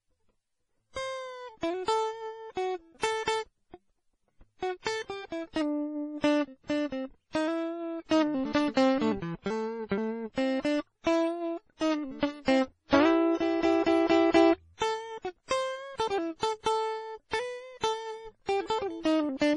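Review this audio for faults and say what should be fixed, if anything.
Throughout the clip, the music was likely re-encoded by a chain of lossy codecs, which is transcoding between lossy codecs. Nothing sounds above 10.5 kHz, and layered swirly, watery artefacts suggest a very low-bitrate MP3 followed by WMA and MP3 passes. To prevent this, encode once, directly from the original lossless master.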